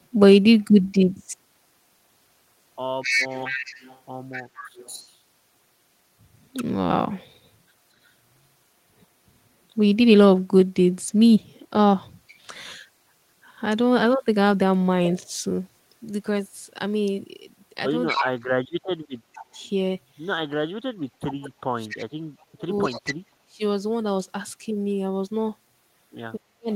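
From 3.02 to 5.15 s an echo leak returns a delayed copy of the speech 234 ms late, about 10 dB below it. The likely cause is far-end loudspeaker sound that escaped the echo canceller. On a spectrogram the harmonic striations repeat, shifted right. Briefer leaks follow at 12.27 to 12.35 s (faint, about 30 dB down) and 18.07 to 18.3 s (strong, only about 5 dB down).

From 18.14 to 19.58 s, speech suppressed in double talk sets in. The talker drops by as much as about 40 dB, likely because the canceller took overlapping talk for echo. The result is dips, dull highs or choppy gaps, seen as a hollowed waveform envelope or emptied upper bands.

A longer leak runs from 19.33 to 23.13 s at about 20 dB down. Suppression recurs from 20.54 to 23.62 s and again from 26.39 to 26.71 s.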